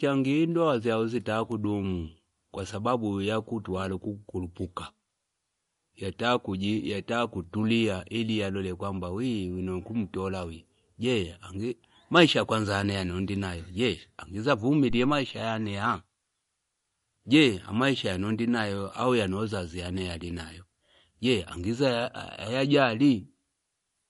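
From the start, the speech sounds watery and swirly, with chirpy, metallic s sounds. Nothing is heard above 11.2 kHz. The likely cause is MP3 compression at a low bitrate, around 48 kbps, where weak frequency lines flicker between frames.

At 14.90 s a phantom power thump arrives and lasts until 15.32 s. A supply was switched on a live input. The voltage step passed through the coupling capacitors. It sounds like a deep thud, dying away over about 94 ms.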